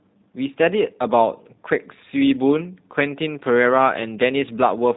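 Throughout, the speech carries plainly audible G.729 codec damage: nothing above 4 kHz, and a rough, synthetic texture from pulse-based excitation, consistent with 8 kbit/s G.729A.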